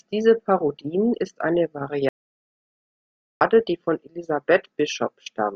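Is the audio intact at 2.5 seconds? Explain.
No. An audio dropout to silence runs from 2.09 s to 3.41 s, so 2.5 s falls inside a stretch of silence. The input signal was lost for about 1.32 s, most likely through a momentary disconnection or mute upstream, while recording carried on writing silence. The speech cuts off abruptly, leaving a dead gap with no room tone or background, then resumes just as suddenly, and whatever was said during that span is gone.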